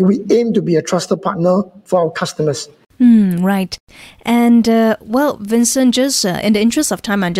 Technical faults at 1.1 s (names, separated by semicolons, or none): none